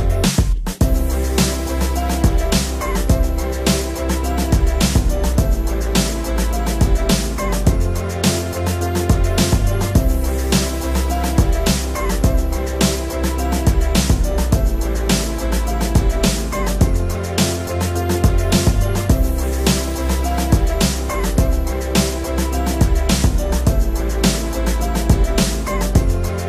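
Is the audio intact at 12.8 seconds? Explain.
Yes, the audio is intact at 12.8 seconds, with no dropout, click, distortion or other fault audible at that point.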